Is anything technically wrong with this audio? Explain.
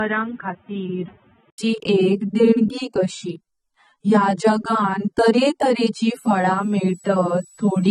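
Yes, there are three problems.

Throughout, the speech sounds smeared and watery, with nothing above 12.9 kHz. This likely comes from low-bitrate audio saved at a high bitrate, so the earlier codec's losses remain.

From 0 to 1.58 s the speech sounds narrow and boxy, cut off above 3.8 kHz and about 5 dB quieter, with a noise floor roughly 30 dB down. An 80 ms gap follows. This likely means the input switched to a poorer device.

From 6.19 s to the end, right after "जगान तारे तारे ची", a faint high whistle drifts between 7.85 and 7.96 kHz, about 30 dB below the speech. This is a switching supply whistle from a power supply's audible oscillation.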